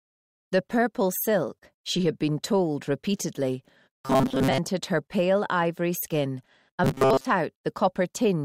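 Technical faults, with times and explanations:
4.03–4.58 s and 6.84–7.26 s, robotic sound from repeated short buffers: a rigid metallic buzz fixed at 133 Hz, likely from one 7.5 ms block repeated over most of the skipped audio, unlike a jittery stutter.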